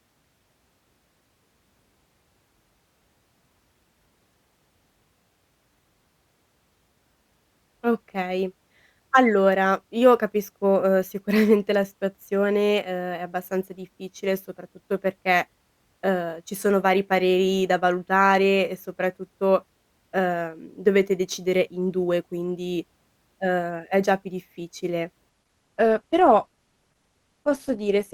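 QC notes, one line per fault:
25.29–28.13 s, adaptive stream at a lower bitrate: the speech abruptly loses treble, with nothing above 12.1 kHz, and turns grainier, which fits a switch from Opus at about 64 kbit/s down to 16 kbit/s. Unlike a dropout, there is no gap, only a sudden step in quality.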